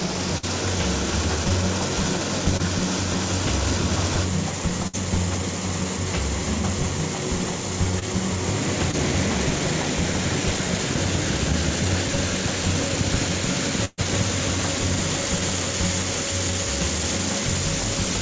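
At 0.38 s and again at 4.87 s, the sound is held and fades for 50 to 60 ms, then jumps ahead. This is a burst of packet loss: the receiver stretched the last audio across packets that never arrived. Brief smears or wobbles at 2.57, 7.99 and 8.91 s are short concealed packet loss, each hole of about 20 ms patched from the preceding sound and blended back. The longest burst of packet loss, from 13.85 to 14.0 s, holds and fades for about 124 ms, drops briefly to silence, then resumes with that stretch missing.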